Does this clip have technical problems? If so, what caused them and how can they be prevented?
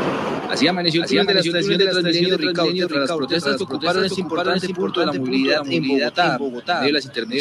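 Yes. A doubled audio track runs throughout. A clean copy trails about half a second behind, a few decibels quieter. It was likely captured twice through a slower second path. Mute duplicate inputs or monitoring routes before recording.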